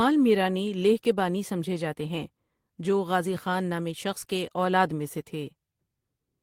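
A speech recording, and nothing is technically wrong with it.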